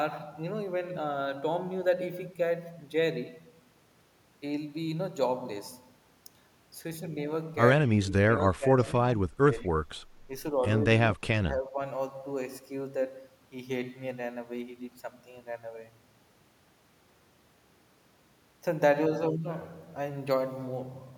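Speech suppressed in double talk, at 7.86 to 8.8 s, 9.16 to 9.52 s, 11.14 to 11.31 s and 11.5 to 11.78 s: the speech sinks and breaks up in short pieces, by roughly 20 dB in the first stretch, less in the second, near 30 dB at 11.14 s, and only slightly at the end. This is likely an echo canceller mistaking the talker for returning loudspeaker echo while the far side spoke, and damping both.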